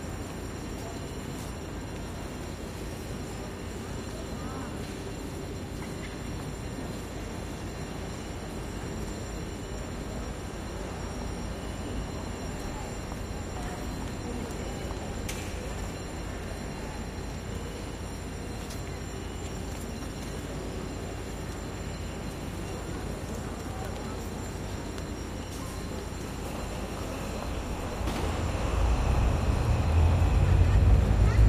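At 14.54 to 14.58 s and again at 20.04 to 20.12 s the sound briefly jumbles: chunks out of order. A 20 ms chunk played one chunk late in the first event and three chunks late in the second, so each event has three hard joins where the waveform jumps. Unlike a dropout, no audio is missing and no silent gap appears. The same material is simply heard in a scrambled sequence.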